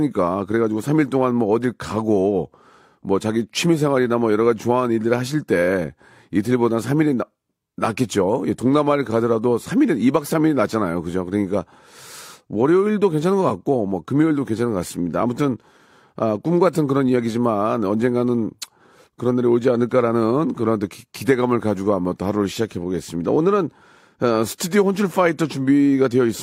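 A speech recording with no technical faults to report. No dropouts, distortion or timing problems turn up anywhere in it.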